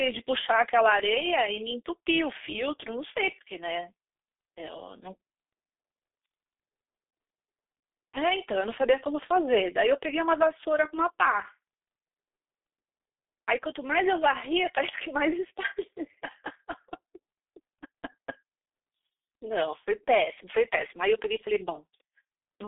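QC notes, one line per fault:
Throughout: G.723.1 codec, heavy damage; speech is muffled, hoarse, with blurred consonants, since nothing passes above 3.7 kHz and coarse 30 ms frames fit 6.3 kbit/s.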